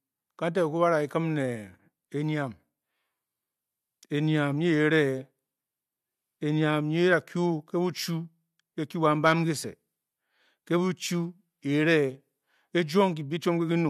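Listening to the speech in this clip, nothing stood out as a technical problem.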